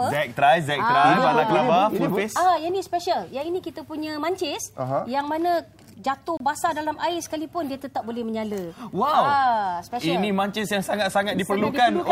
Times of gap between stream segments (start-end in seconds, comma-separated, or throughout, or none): 6.37-6.40